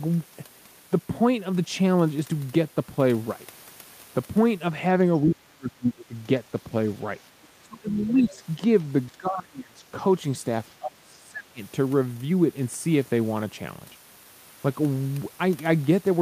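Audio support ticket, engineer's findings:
Echo canceller likely misread double talk and suppressed the near talker: speech suppressed in double talk, dipping about 20 to 30 dB at 5.22–6.15, 7.62–8.61, 9.10–9.81 and 10.79–11.61 s.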